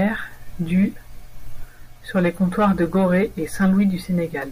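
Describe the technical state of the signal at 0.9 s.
At 0.9 s the speech signal is intact, with no audible fault at that moment.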